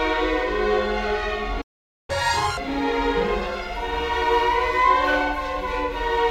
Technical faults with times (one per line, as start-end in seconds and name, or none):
1.61-2.10 playback stall
2.10-2.57 catch-up at higher speed